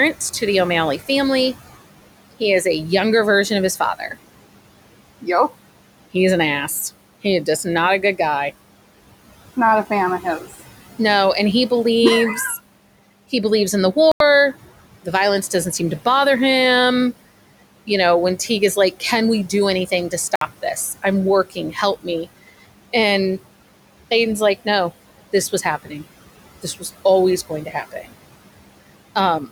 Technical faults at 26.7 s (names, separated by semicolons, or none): noise suppressor artifacts; speech cut by the noise suppressor